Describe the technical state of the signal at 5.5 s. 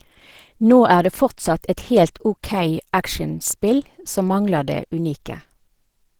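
At 5.5 s the speech sounds hoarse and muffled, with a grainy, rough texture where the clean tonal parts of the voice should be. The damage is plainly audible and runs through the whole clip. The likely cause is Opus compression in its hybrid speech mode, where a low-rate speech coder handles the lower band and coarsely coded bands fill in above it. The result fits a starved bitrate of around 16 kbps, even though content still reaches about 20.2 kHz.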